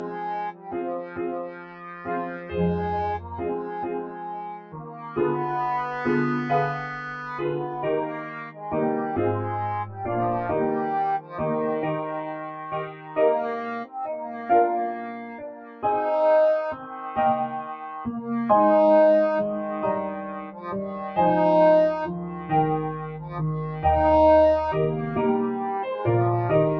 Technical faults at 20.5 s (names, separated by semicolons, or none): noise suppressor applied to music or sounds; sound cut by the noise suppressor